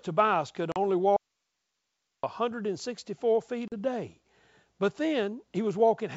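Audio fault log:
0.72 to 0.77 s: packet loss on an ADPCM call, a 40 ms hard-edged silent gap, which fits about two lost packets; the decoder's predictor loses step, so sound resumes slightly distorted, showing as a blank slot.
1.17 to 2.23 s: audio dropout to a faint residue, signal gone for about 1.07 s leaving only hiss around 55 dB down; likely a broken upstream feed with live path, seen as an abrupt flat low-level band.
3.68 to 3.74 s: packet loss on an ADPCM call again, 40 ms silent hole before "day but", resuming with brief distortion as the decoder's step size resynchronises; a vertical blank stripe.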